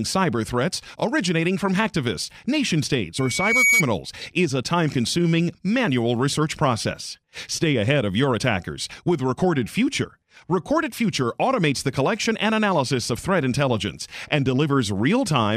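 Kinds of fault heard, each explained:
Loudspeaker feedback squeal: a microphone is picking up the loudspeaker it drives, and at about 2.2 kHz the loop gain rises above one, so that tone feeds itself. From 3.16 to 3.84 s a single whistle swells over roughly half a second until it sits a few decibels above the speech. On a spectrogram it shows as one bright horizontal line at 2.2 kHz that thickens, while the waveform's envelope grows steadily.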